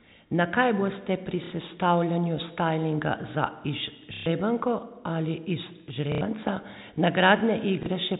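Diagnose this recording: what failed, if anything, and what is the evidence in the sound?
The network dropped packets, and the receiver covered each gap by replaying the last packet it had: packet loss with last packet repeated. You hear short robotic stutters at 1.44 s (right after "kaj boste pri", before "sestavljanju stajlinga za"), 4.14 s and 6.12 s, and a small blip at 7.83 s, lasting 60, 120, 90 and 30 ms. The lengths point to 30 ms packets, so the longer runs buzz at about 33 Hz. The telephone-band G.711 path underneath carries them faithfully.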